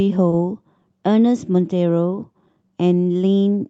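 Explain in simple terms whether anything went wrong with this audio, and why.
Right at the start, from 0.29 to 0.33 s, one sound is briefly held too long. This is a short stall from a late packet: a piece of audio arrived late, so the receiver stretched the last sound for 30 ms and then carried on with nothing lost.

From 1.45 to 3.43 s the receiver makes small timing edits. These are repeated timing corrections: the receiver keeps repeating tiny pieces, adding roughly 50 ms in total, to keep up.

Behind those edits is clock drift between sender and receiver. The sending device's clock runs about 2% slow, so the receiver's buffer keeps running short and needs patching throughout.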